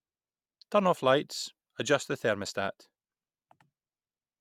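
No technical faults turn up anywhere in the speech recording. There are no events to place in time or describe.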